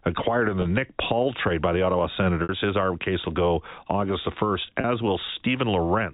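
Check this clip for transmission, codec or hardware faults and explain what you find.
Three short dropouts are audible, all the same fault; the telephone-band G.711 sound underneath is the line's normal character.

Packet loss with pitch repetition occurs at 0.62–0.65 s (just after "acquired in"), 2.43–2.49 s and 4.81–4.84 s. Audio went missing for 30, 60 and 30 ms, which fits a few 10 ms packets each time. The receiver filled each gap by repeating the last pitch period and fading it down. The two 30 ms gaps sound like a brief, buzzy hold on the voice; the longer middle gap fades into silence before the speech returns with a short cross-fade.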